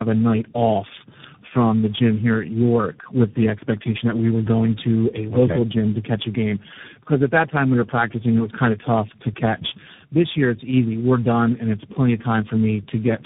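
Throughout the speech, tandem speech coding is audible: the sound has been decoded and re-encoded several times over, with each coder working on the previous coder's already damaged output. The damage accumulates into rough, muffled, warbly speech, worse than any single coder would produce. The smeared, noisy texture points to about four speech codecs in a row, consistent with G.729A, iLBC and a final CVSD stage joined by G.711 links. On a spectrogram, nothing appears above 3.7 kHz, and harmonics look blurred and unsteady.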